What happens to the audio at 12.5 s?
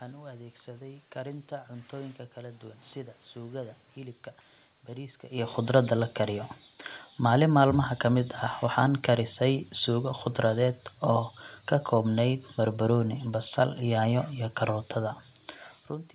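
Nothing goes wrong at 12.5 s; the audio there is intact, with no dropout, glitch or distortion.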